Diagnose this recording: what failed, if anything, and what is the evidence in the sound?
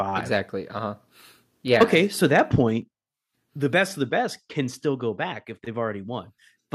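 Microphone overload at 1.8–1.98 s and 2.36–2.4 s: the loudest peaks sound flattened and crackly, likely from the converter input being driven about 6 dB and 2 dB past full scale.

Microphone volume stepped down at 1.83, 2.82 and 4.71 s (after "of the best can"): sudden drops of about 4, 4 and 3 dB, likely from call processing lowering the input gain.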